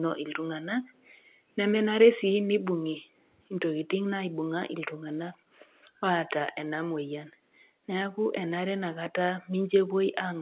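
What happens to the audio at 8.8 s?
Nothing goes wrong at 8.8 s: the speech carries on intact there, with the narrow, telephone-band sound of G.711 mu-law coding and no break, click or other fault.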